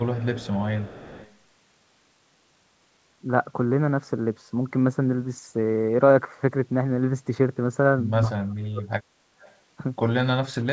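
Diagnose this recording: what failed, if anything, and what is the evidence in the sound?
Echo leak, 0.02 to 1.34 s and again 9.40 to 9.56 s, at the call processing stage: a faint copy of the speech trails the direct sound by 225 ms, well below it in level. The far end's echo canceller likely let part of its loudspeaker pickup back into the return path.

Speech suppressed in double talk, 8.28 to 9.05 s, also at call processing: the speech drops sharply, close to silence at its deepest, for roughly 0.7 s in total. With both sides talking at once, the echo canceller likely mistook this talker for echo and attenuated it.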